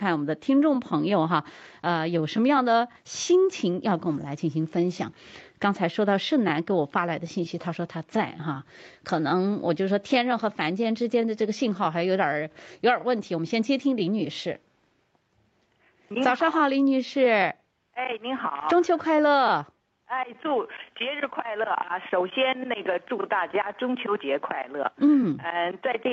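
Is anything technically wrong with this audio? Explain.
No, nothing technically wrong can be heard here.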